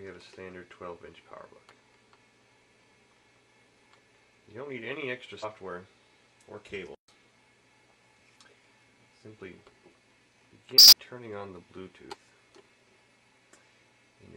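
Damaged data in a compressed stream disrupts the sound at 5.39 s (56 ms), 10.73 s (200 ms) and 13.80 s (50 ms). Corrupted frames knock the decoder out of sync until it finds another frame header, leaving a chirp, click or brief hole, seen as an abrupt vertical break in the spectrogram.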